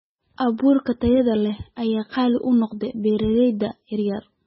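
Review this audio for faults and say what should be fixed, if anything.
Throughout the speech, the sound is watery and swirly, with nothing above 5.6 kHz, likely from heavy MP3 compression at a very low bitrate near 16 kbps. To prevent it, encode at a much higher bitrate or keep an uncompressed source.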